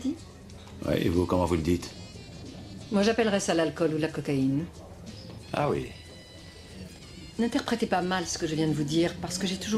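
At 5.24 s a call bitrate drop sets in: the bandwidth estimate falls and the encoder codes more coarsely, which fits a cut from about 96 to 24 kbps. From there to 7.07 s the sound turns rough, watery or muffled, with high frequencies trimmed, before clearing.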